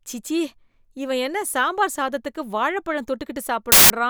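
File tags played as audio at 3.72 to 3.9 s: an embedded cover picture's compressed data is read as samples, giving a hard-edged burst of very loud white noise.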